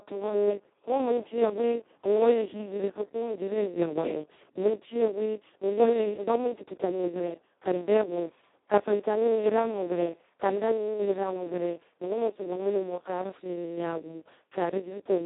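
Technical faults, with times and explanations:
Throughout, Speex codec: the speech comes out hoarse, buzzy and close to robotic, which points to Speex squeezed down to its very lowest rate, around 2 kbps. At that level there are barely any bits left for the excitation signal, so the coder ends up acting almost like a vocoder and the natural texture falls apart. The line band runs from about 250 Hz to 3.7 kHz, with nothing at all above 3.8 kHz, so the whole clip sounds thin and muffled.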